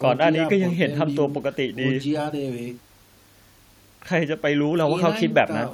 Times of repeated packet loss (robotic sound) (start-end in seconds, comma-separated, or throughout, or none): none